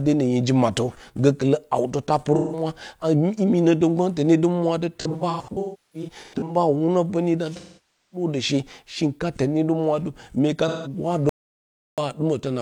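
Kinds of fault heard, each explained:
AAC frame loss with concealment: at 2.36, 5.01–6.56, 7.56–8.27 and 10.68 s, missing frames are rebuilt from the last good spectrum, giving smeared, phasey patches.
Audio dropout to silence: from 11.29 to 11.98 s the speech cuts to complete silence with no room tone, likely a lost input, and about 0.68 s is gone.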